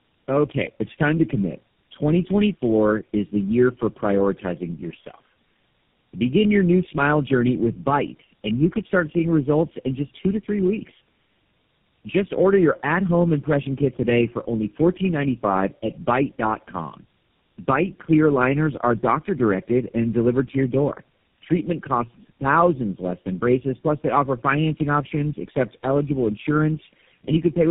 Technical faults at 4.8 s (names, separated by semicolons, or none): tandem speech coding